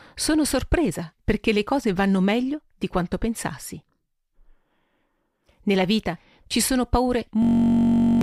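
From 7.42 s to 8.21 s, the speech turns into a system hang loop. The system stalled while the hardware kept replaying its ring buffer. One 21.33 ms slice repeats as a steady buzz at 46.9 Hz, which fits a 1024-sample buffer. Roughly 0.7 s is lost.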